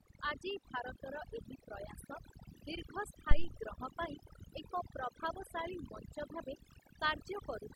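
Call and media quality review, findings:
Overdone noise removal, throughout. Background dropped and broken into twinkling specks. Over-aggressive noise suppressor zeroing bands near noise estimate, taking quiet speech detail. Unlike codec swirl, artefacts track pauses and low-level passages, not bitrate-starved band allocation.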